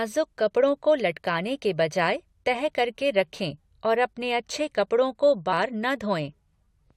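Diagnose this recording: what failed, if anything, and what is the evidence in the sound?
The codec stage failed, with compressed frames skipped. At about 5.52 s, just after "अपने अच्छे कपड़ों को", the speech jumps forward. Roughly 0.4 s of audio never plays. The jump is about fifteen frames, which fits a 23.2 ms frame. Whole frames were either missing from the file or rejected by the decoder as damaged.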